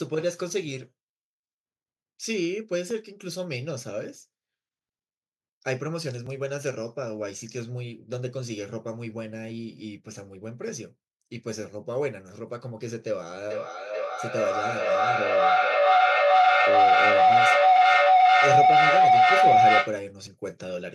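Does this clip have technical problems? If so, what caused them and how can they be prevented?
Yes. Small jumps in the speech at 2.91, 6.27 and 20.27 s, the last a longer skip of about 15 ms, are likely a dropped buffer (overrun): samples were overwritten before being read, joining the audio across a gap of about 5 to 15 milliseconds. Larger buffers and less CPU load prevent this.

From 13.5 to 20.1 s a feedback howl builds near 700 Hz, with repeats roughly every 0.4 s, peaking about 13 dB above the speech, because a microphone-to-loudspeaker loop gained level each trip. Keeping a single device on the call per room, or using headphones, prevents it.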